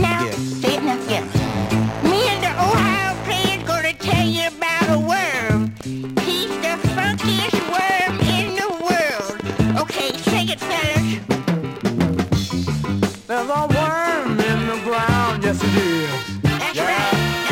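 From 7.28 to 10.11 s a steady ticking sits over the sound, a train of clicks at about 10 per second, around thirty in all, each much the same shape and standing well above the audio, pauses included. The likely cause is interference or a faulty connection or power supply.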